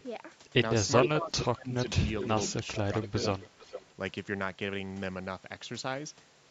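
Echo leak at 1.01 to 1.09 s, 1.40 to 1.45 s and 1.80 to 3.94 s in this speech recording: a copy of the talk returns about 0.44 s late, first roughly as loud as the speech, then around 10 dB and 15 dB down. The likely cause is a far-end loudspeaker whose echo canceller let part of its microphone pickup back into the call. Speech suppressed in double talk at 1.13 to 2.03 s and 2.53 to 2.89 s: the talker's level dips while the echo overlaps, by roughly 15 dB at most across about 0.4 s in the first stretch and by about 10 dB briefly in the second. This likely comes from the canceller mistaking simultaneous speech for echo and attenuating both. The call's microphone processing, with no content above 8 kHz, works as expected.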